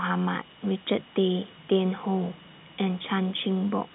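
Nothing stood out on listening to this speech, which carries the narrow band of G.711 telephone coding, with nothing above about 3.8 kHz.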